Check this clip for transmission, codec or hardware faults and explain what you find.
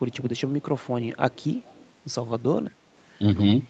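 One fault turns up: an echo leak, heard four times at 0.37–0.41 s, 0.82–0.86 s, 1.31–1.46 s and 1.64–1.90 s. Each is a faint, delayed double of the speech trailing 191 ms behind, roughly 35 dB down, the last nearer 30 dB. The likely cause is a far-end speakerphone whose echo canceller let its loudspeaker's output back into the call. The audio's top end stops at 8 kHz, which is how the call path here band-limits it.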